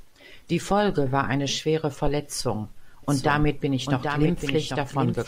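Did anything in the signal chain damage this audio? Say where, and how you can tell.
Yes. A doubled audio track appears at 3.03 s and runs to the end of the speech: a second, full-band copy of the same audio trails the original by roughly 0.7 s, a few decibels quieter. It enters abruptly, with no decay or room colour, so it isn't an echo. The likely cause is the signal being captured twice, once through a slower path such as a lagging driver buffer, or an edit that left two copies out of step.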